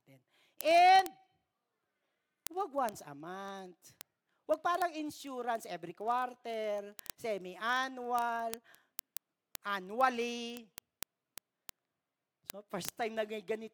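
From 0.12 s to 13.73 s the speech carries word clock ticks: a digital link read against an unlocked clock, mismatched by roughly 700 ppm, slips a single sample about every 40 ms. That gives several hundred sharp ticks at a steady rate.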